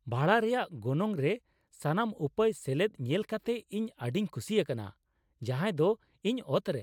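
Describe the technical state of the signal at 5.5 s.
At 5.5 s the signal is intact, with no audible fault in the speech at that moment.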